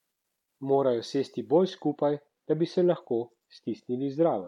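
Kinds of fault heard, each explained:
De-emphasis applied wrongly: an unneeded treble-cut filter acts from 1.70 s onward, sloping the highs smoothly to about 8 dB down at 10 kHz, so the speech turns dull and muffled.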